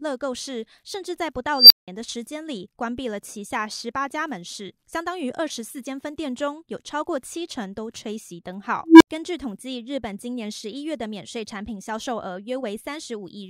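An unstable filter breaks into the speech at 1.54–1.88 s and 8.85–9.08 s. A recursive filter with bad coefficients feeds back on itself, so a squeal (near 5 kHz, then a low tone near 300 Hz) swells over about 160 ms, clips, overflows, and drops to silences of 175 ms and 72 ms.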